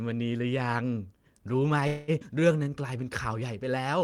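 At 1.87 s the speech stops moving forward and the last sound gets smeared out as a fading buzzy tail. That lasts until 2.11 s, with about 204 ms filled in, and it never drops to silence. This is a call audio freeze, likely caused by packets stuck in transit while the jitter buffer ran dry, so the receiver kept extending what it had. When the speech picks up again it carries on from where it stopped. Nothing is lost, but everything after it now runs about 204 ms later.

Right after that, at 2.20 s, there's a skip ahead. Playback jumps past roughly a tenth of a second of speech, and the two sides are joined with only a very short fill, about 10 ms, running to 2.24 s. This happens when later audio is already queued and a stretch gets dropped, so the sound lurches forward instead of pausing. It also takes back about a tenth of a second of the delay the freeze added.

From 2.34 s to 3.02 s the jitter buffer slow-down kicks in. 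The receiver repeats tiny pitch-period slices over and over to rebuild its reserve, so the speech plays at about 86% speed with the pitch unchanged. That stretches the passage by 106 ms. You hear it as drawn-out sounds with a slightly sluggish feel.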